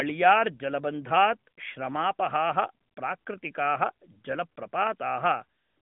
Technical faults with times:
none

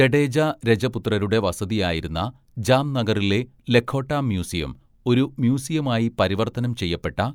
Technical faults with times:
none

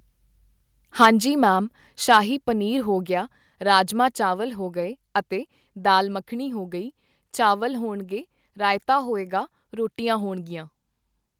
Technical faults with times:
1.01-1.08 microphone overload
1.05 microphone volume stepped down
2.04 microphone volume stepped down
2.10-2.17 microphone overload

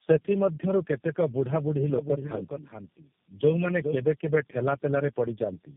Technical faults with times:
0.00-5.76 tandem speech coding

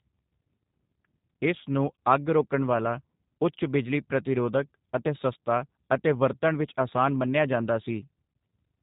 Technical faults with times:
0.00-8.83 G.729 codec

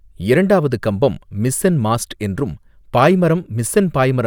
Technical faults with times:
none

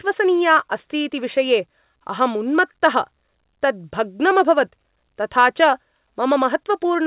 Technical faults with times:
none

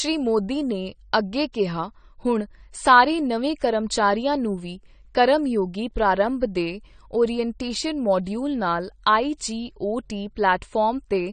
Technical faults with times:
0.00-11.32 AAC compression
1.53 pre-echo

